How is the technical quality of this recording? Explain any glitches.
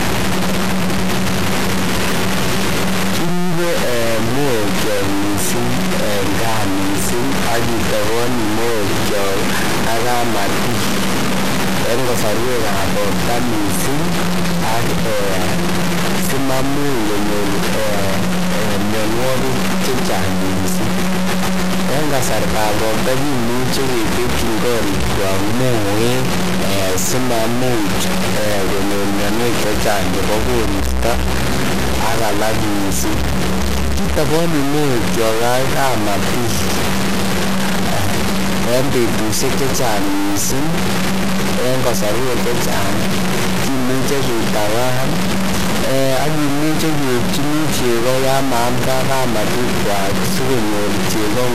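The technical quality is poor. The speech is heavily degraded throughout, and there are two brief stutters.

Low bit depth without dither runs through all of it. The sound was likely truncated to what sounds like about 3 bits without dither. The rounding error tracks the speech, so the grit is nearly as loud as the voice.

MP2 compression is also present throughout. It likely comes from a low bitrate, consistent with about 80 kbps. Upper sub-bands switch off, so the speech sounds dull, with plainly audible gurgling, granular distortion.

A repeated buffer occurs at 32.12 s and 41.63 s. Playback received no new audio in time, so a roughly 10.7 ms chunk played twice, which fits a 512-sample buffer. Each repeat is heard as a click or tiny buzz.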